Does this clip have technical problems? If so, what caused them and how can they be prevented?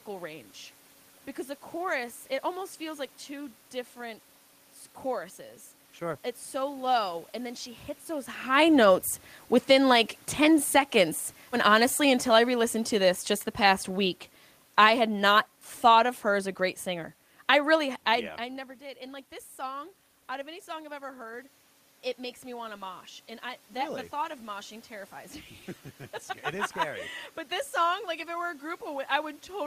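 Yes. Automatic gain falling runs from 9.6 to 18.4 s. The gain control judged the input too loud, or its background noise too strong, and lowered it by about 8 dB. The speech and the room noise sink together. To prevent it, set a lower input level and turn off automatic gain.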